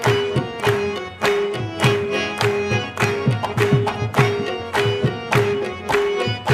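No technical fault can be heard anywhere in the audio; the signal stays steady and intact throughout.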